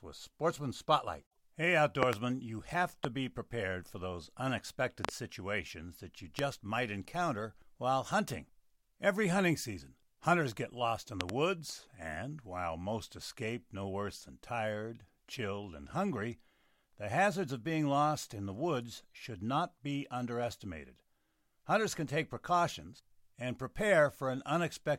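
Loud pops break into this speech clip five times. The first, at 2.03 to 2.15 s just before "you have", is a double pop. A single pop follows at 3.05 s, then another double at 5.05 to 5.11 s ahead of "situations that you". A single pop comes at 6.39 s, between "situations that you" and "might encounter while hunting", and a last double at 11.21 to 11.31 s. The doubles peak about 25 dB above the speech and the singles about 20 dB, each a sharp thump with the speech continuing underneath. The likely cause is a voltage spike from a switch, static discharge or a driver glitch, which the following circuitry shapes. On a waveform each pop is a tall narrow spike towering over the speech envelope. On a spectrogram it is a thin vertical stripe spanning the whole frequency range, and the doubles show two close stripes.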